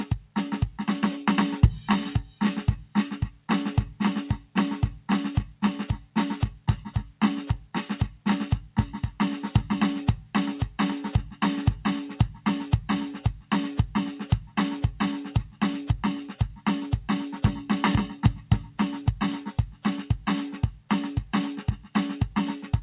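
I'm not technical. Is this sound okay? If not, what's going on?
No. In this music, the sound briefly dips at 0.20 to 0.36 s, 2.25 to 2.41 s and 3.31 to 3.49 s. That is sound cut by the noise suppressor: the call's noise filter mistook parts of the music for background noise and turned them down.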